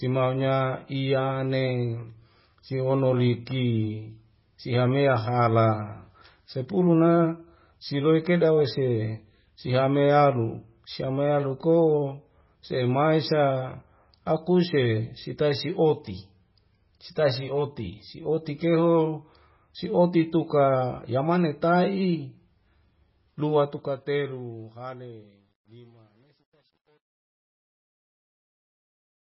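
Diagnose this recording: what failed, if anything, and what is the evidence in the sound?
The codec stage: the speech sounds watery and swirly throughout, with nothing above 5.6 kHz. A spectrogram shows a flat ceiling and flickering holes, likely from MP3 compression at around 16 kbps.

Sample-format conversion: truncation distortion on a fade runs from 23.28 s to 29.23 s, riding the fade-out. It is gritty from 24.7 s, and the waveform shows square steps, which fits a 10-bit fade without dither.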